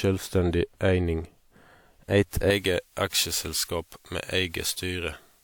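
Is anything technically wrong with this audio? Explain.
Yes. From 2.50 s to the end, the speech has pre-emphasis left on. A treble boost was applied for recording or transmission, and the matching de-emphasis was never applied on playback. The tilt fits a J.17 curve. At 10 kHz the level sits about 11 dB above 1 kHz. The speech turns thin and bright. Sibilants become sharp and prominent.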